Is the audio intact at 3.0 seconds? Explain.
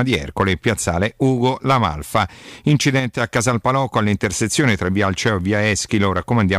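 No. A sudden gain jump runs from 2.99 to 3.20 s, where the level drops by about 5 dB in a single sample step. It's likely a gain setting applied without a ramp, so the speech and its background noise fall together abruptly, then return.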